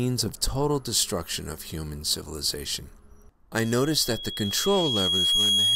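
Loudspeaker feedback squeal from 3.58 s: the microphone re-amplifies its own loudspeaker, and a 3.3 kHz tone swells over two seconds, ending louder than the sound.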